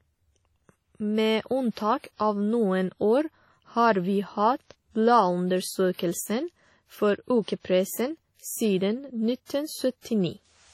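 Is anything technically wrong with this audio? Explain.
Yes. WMA compression is the likely cause of heavy damage throughout the clip. Long transform blocks smear quantisation noise across tens of milliseconds and zero weak spectral lines, which fits a bitrate around 32 kbps. The speech rings and washes, with breathing hiss and nothing above 16.3 kHz.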